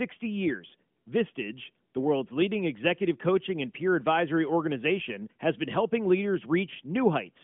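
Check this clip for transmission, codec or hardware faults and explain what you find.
Nothing here points to a transmission, codec or hardware fault, so there's nothing to flag in this speech.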